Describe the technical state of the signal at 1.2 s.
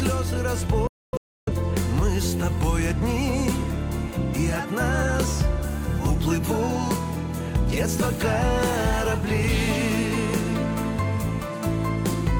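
A digital broadcast dropout runs from 0.87 to 1.52 s. The receiver muted wherever frames arrived damaged, so the sound vanishes in several holes totalling about 0.55 s, the longest about 0.3 s, each entered through a 3 ms fade. The waveform shows flat-line gaps, and the spectrogram shows blank columns across all frequencies.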